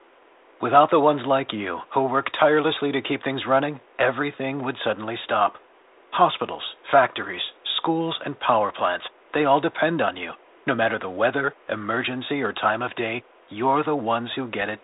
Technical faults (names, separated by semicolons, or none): none